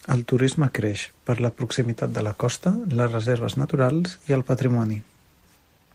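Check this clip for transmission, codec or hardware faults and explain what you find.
There's a timing problem here, coming from the link rather than the codec or hardware.

Clock drift between sender and receiver runs through the whole clip, with the sender's clock about four percent fast, so the receiver's buffer keeps overfilling.

Repeated timing corrections follow from 0.13 s to the end: the receiver keeps trimming short bits to keep pace, giving small hiccups and a slightly hurried, uneven tempo.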